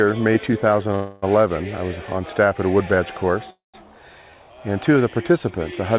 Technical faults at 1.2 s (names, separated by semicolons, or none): call audio freeze